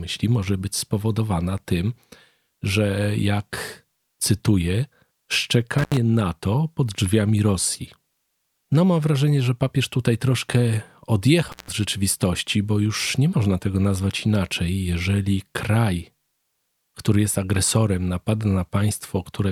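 At 5.78 to 5.97 s and again at 11.48 to 11.72 s, an intermittent contact briefly opens the signal path, dropping the speech for 80 ms and then 165 ms. Crackly clicks frame each gap, with faint hiss between. On a waveform the envelope collapses abruptly; a spectrogram shows vertical broadband streaks bracketing a near-empty band.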